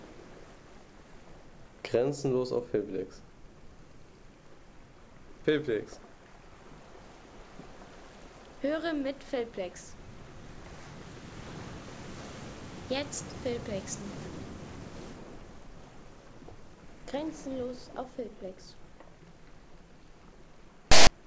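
At 20.92 s the player reaches a block of text tags and decodes it as audio, a case of file tags played as audio. The character bytes become sample values, producing a loud rasp pushed off to one side that starts and stops with hard edges and lasts until 21.07 s.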